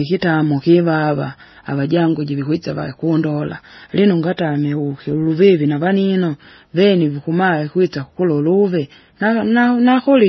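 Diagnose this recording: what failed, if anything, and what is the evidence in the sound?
The codec stage failed: throughout the speech nothing survives above 5.9 kHz, and two layers of artefacts are heard together. This is likely transcoding between lossy codecs, a low-rate MP3 re-encoded as Vorbis near 22 kbit/s, the Vorbis pass spending bits on the MP3's artefacts, unlike a single low-bitrate encode.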